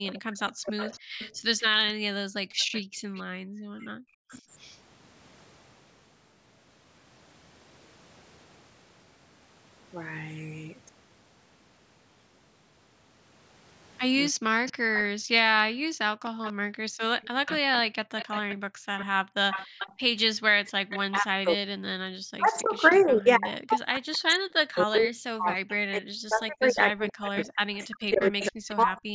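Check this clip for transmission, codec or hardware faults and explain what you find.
The clip has three echo-canceller faults, recurring across the call: speech suppressed in double talk, echo leak, and background gated by the echo canceller.

Speech suppressed in double talk occurs from 0 to 4.21 s, 14.43 to 17.93 s, and 21.1 s to the end. The talker's speech dips by up to about 40 dB, thinning or breaking into fragments, for roughly 1.5 s in the first span, under a second in the second, and around 7 s in the last. This likely comes from the canceller failing to separate this talker from loudspeaker echo while both sides spoke, so it turned everything down. Unlike gating, it is the foreground speech itself that is lost, not the room sound.

Echo leak runs from 0.79 to 4.78 s and from 14.66 to 28.75 s. A fainter copy of the speech trails it by a steady 283 ms, about 20 dB below the speech at first and closer, about 15 dB below, in the later stretch. 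The likely cause is a far end on loudspeaker whose canceller let part of its microphone pickup return. The fixed delay and the copy's weaker level distinguish it from room reverberation, which smears continuously rather than repeating.

Background gated by the echo canceller appears from 1.31 to 3.15 s and from 15.16 to 20.82 s. The room tone drops out abruptly, by about 38 dB and then about 40 dB, for roughly 1 s and 2 s in total, then returns. The canceller clamped the microphone while the loudspeaker played. Because only the ambient bed vanishes, and it comes back, this differs from network dropouts, which silence everything at once. The call's microphone processing limits the band to 8 kHz, which is expected.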